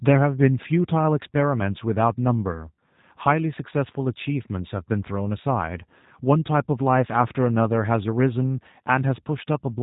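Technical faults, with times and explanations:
Throughout, G.729 codec: the speech is rebuilt from a vocal tract filter, a pitch predictor and a few pulses per 10 ms frame, so it sounds plainly rough and synthetic, which fits 8 kbit/s G.729A. A spectrogram shows a hard ceiling at 3.8 kHz and smeared harmonics.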